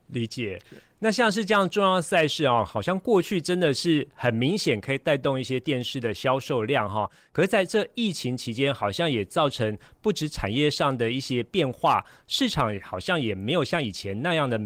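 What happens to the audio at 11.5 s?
At 11.5 s the speech is intact, with no fault at that moment, only the light coding damage of the Opus voice compression at about 24 kbps.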